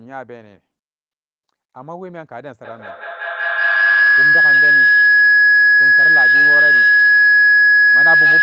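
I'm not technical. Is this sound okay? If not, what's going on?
No. From 2.64 seconds until the end, a piercing whistle, around 1.5 kHz, with the sound looping back roughly five times a second, grows louder than the speech. This is feedback howl: two devices in one room on the same call keep re-amplifying each other's sound until muting breaks the loop.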